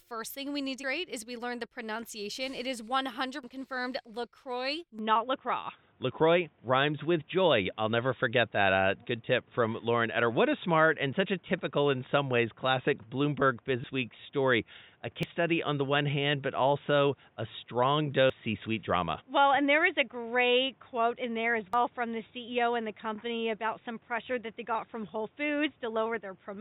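Speech, with forward jumps at 0.84, 3.44, 13.84, 15.23, 18.30 and 21.73 s, each skipping roughly 300 ms or 100 ms of audio with no gap, which points to a likely dropped buffer (overrun), where unread samples were overwritten and the remaining audio spliced together. At 4.99 s the sound turns dull and boxy without any silence. From there to the end the band is narrower, the level shifts by about 5 dB, and new background noise sits about 35 dB below the signal, likely from the input switching to a poorer device.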